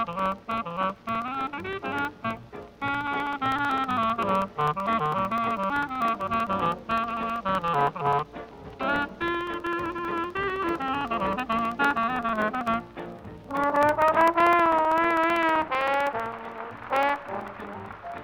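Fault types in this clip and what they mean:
Periodic USB or driver dropouts: the USB link or audio driver stalls on a fixed cycle. Each stall leaves a silent gap of about 2 ms. Gaps repeat every 64 ms from 0.07 to 18.18 s, heard as steady ticking wherever sound is present.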